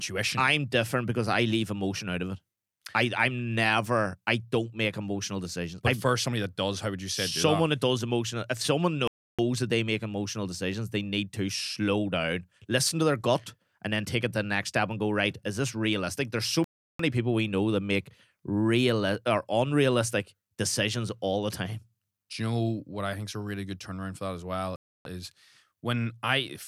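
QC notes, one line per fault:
9.08–9.39 s, 16.64–16.99 s and 24.76–25.05 s, Bluetooth stall: the speech drops to clean silence for about 0.31 s, 0.35 s and 0.29 s, then resumes. This is likely a wireless link pausing while delayed packets were resent. Unlike a glitchy click, each gap is a tidy pause.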